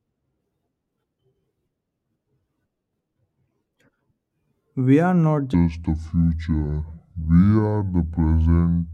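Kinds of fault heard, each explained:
Section at the wrong speed: From 5.54 s, just after "are not", the speech plays at 0.626 times its recorded speed until the end. Pitch and tempo drop together, roughly seven semitones lower. It sounds slow and deep. The likely cause is playback against the wrong clock.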